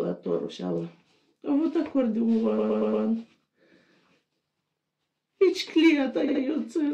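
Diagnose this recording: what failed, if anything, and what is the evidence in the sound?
Repeated frames in the codec or storage stage. A 116 ms block replays four extra times from 2.57 to 3.04 s, and a 70 ms block replays twice from 6.27 to 6.41 s. Unlike concealment or an underrun, these are exact copies with no gap or fade, and they lengthen the audio by about 0.6 s.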